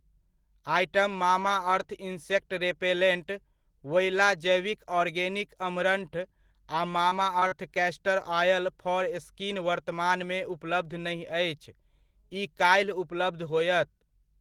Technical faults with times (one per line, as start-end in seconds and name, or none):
7.09-7.13 short concealed packet loss
7.39-7.54 short concealed packet loss